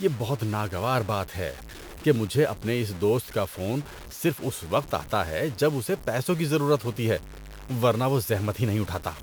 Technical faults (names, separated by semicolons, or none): low bit depth without dither